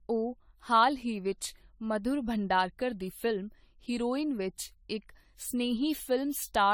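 Throughout the speech, the sound is swirly, smeared and hollow, with blurred consonant attacks. This is generation loss, likely from around seven re-encodes in an AAC-type codec near 64 kbit/s. Unlike a single low-bitrate pass, each misaligned frame grid stacks fresh noise and spectral holes.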